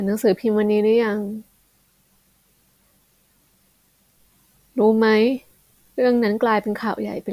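No audible faults in this speech.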